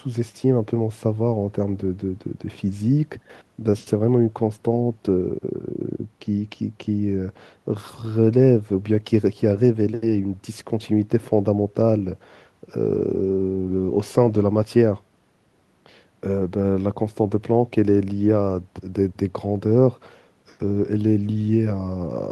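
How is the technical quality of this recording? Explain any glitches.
Nothing stood out on listening to this speech recording; it sounds like it came through a call connection, with the top end stopping at around 12 kHz, as a call codec would produce.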